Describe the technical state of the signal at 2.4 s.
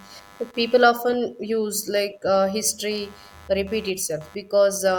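At 2.4 s the speech carries computer activity noise, which runs through the whole clip rather than starting or stopping near that point. It is a buzzy, chirping pulse train at around a hundred pulses a second, sitting roughly 30 dB below the speech. Changing load on the computer is disturbing the ground that the audio circuit shares, which is why the noise follows the machine's activity and not the speech. Unlike steady mains hum, it fluctuates in character as the load shifts.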